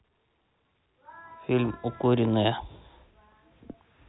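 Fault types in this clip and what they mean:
Packet loss with pitch repetition: gaps are filled by repeating the last pitch period. Short buzzy holds sound at 2.01 s and 3.72 s.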